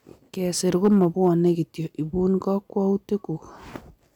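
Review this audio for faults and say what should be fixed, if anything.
Hard clipping affects the speech from 0.75 to 1.48 s. The signal is driven about 4 dB past what a stage in the chain can pass, so peaks are cut flat, adding high harmonics heard as crackle and edge on louder syllables. Fix it by lowering gain before that stage to leave headroom.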